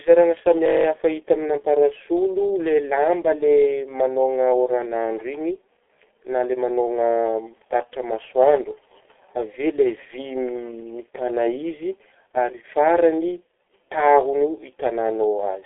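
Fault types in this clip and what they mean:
G.723.1 codec: A low-rate telephony codec running here at about 6.3 kbit/s in 30 ms frames, so the speech is heavily damaged throughout, sounding muffled and hoarse with smeared consonants. It keeps only the telephone band, roughly 300 Hz to 3.4 kHz, and nothing survives above 3.6 kHz. On a spectrogram the upper region is an empty flat ceiling, and the harmonics below it look blocky and coarsely quantised from frame to frame.
System hang loop: The system froze while the sound hardware kept replaying its ring buffer, so one 21.33 ms slice repeats nine times from 0.66 to 0.85 s, just before "hita aminah parasolo lay". That loop length fits a 1024-sample buffer, and the repeats produce a rough buzz at 46.9 Hz. The waveform shows one identical short shape copied end to end, and the spectrogram shows evenly spaced vertical stripes.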